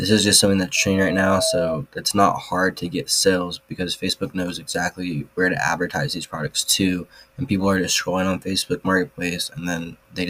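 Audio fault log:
0.76–1.82 s: loudspeaker feedback squeal, a 646 Hz tone swelling over about half a second to roughly signal level as the mic–speaker loop exceeds unity gain; spectrogram shows one bright horizontal line.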